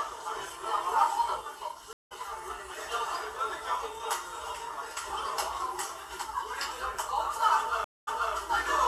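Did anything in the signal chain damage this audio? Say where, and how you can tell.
Yes, a stream reconnect at the network stage: the connection dropped twice and the player restarted its decoder mid-stream. At 1.93 s, 178 ms of silence, then the audio resumes roughly a fifth of a second further on. At 7.84 s, 228 ms of silence, then 255 ms replays.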